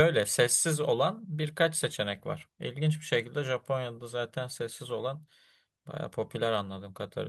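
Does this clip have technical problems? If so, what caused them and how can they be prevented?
No, this clip has no technical problems, so there is nothing to prevent.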